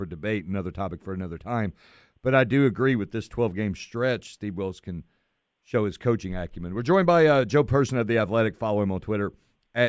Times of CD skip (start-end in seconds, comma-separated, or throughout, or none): none